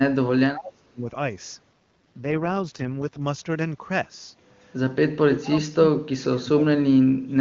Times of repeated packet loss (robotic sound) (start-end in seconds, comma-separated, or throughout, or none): none